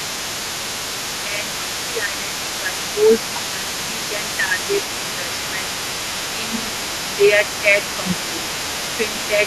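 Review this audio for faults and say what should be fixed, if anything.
Other side's voice leaking through runs the whole clip, roughly 15 dB below the talker. The loudspeaker echo was likely not fully cancelled. Better acoustic isolation or a stronger echo canceller prevents it.

Speech suppressed in double talk dips the talker by about 10 dB at 1.25–5.76, 6.33–6.7, 7.08–7.42, 7.97–8.5 and 8.97–9.41 s. A shallower dip, about 5 dB, comes at 7.62–7.79 s. The canceller likely ducked both voices together. Double-talk detection that keeps the near talker open prevents it.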